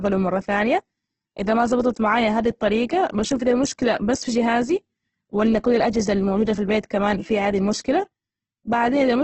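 Throughout the speech, the audio has likely passed through Opus compression at a very low bitrate, in the range that fits about 12 kbps. Starved of bits, the music-mode coder keeps each band's energy but refills the detail with folded or noise-like content, and the bandwidth is cut to wideband, with nothing above 8.2 kHz. The result is heavy codec damage: a dull top end, and a rough, grainy texture where the voiced sound should be smooth.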